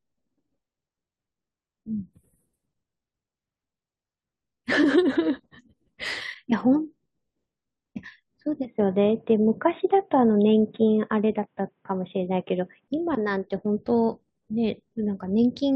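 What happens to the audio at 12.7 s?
At 12.7 s the speech still sounds dull and boxy, nothing above 3.8 kHz, shifted about 5 dB in level, from 8.65 to 12.88 s: likely an input switched to a poorer device.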